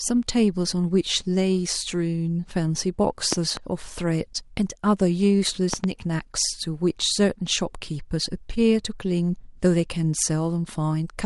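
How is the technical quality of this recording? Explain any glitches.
The technical quality is poor. The speech is dull and grainy throughout, and two sharp double pops break in partway through.

Across the whole recording the speech has a muffled, gurgling, granular edge, which points to MP2 compression. It likely comes from MPEG Layer II coding at a low rate, around 80 kbps. Starved of bits, the encoder switches off the upper sub-bands and coarsely quantises those that remain.

From 3.33 to 3.59 s and again from 5.74 to 5.86 s there is a loud pop, each time a quick pair of clicks that peaks roughly 15 dB above the speech, which carries on underneath. Each is likely an electrical step or pulse, such as a switch, static or a driver glitch.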